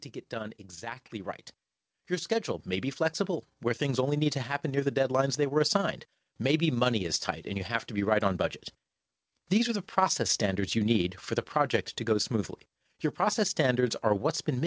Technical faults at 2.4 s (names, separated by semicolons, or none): overlap-add ripple; automatic gain rising